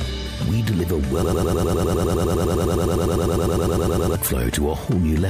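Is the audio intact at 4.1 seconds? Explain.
No. At 4.1 seconds the audio is caught in a broken-record loop running from 1.23 to 4.16 s. A fragment of about 0.1 s repeats exactly, back to back, some 29 times, likely because the player or stream stalled and kept resending its last fragment. The identical repeats with no variation set it apart from a stutter or echo, and the audio that should have played there is lost.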